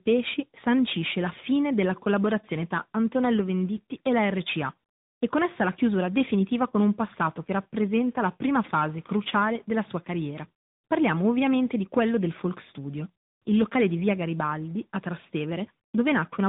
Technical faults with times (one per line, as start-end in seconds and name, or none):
0.00-16.48 tandem speech coding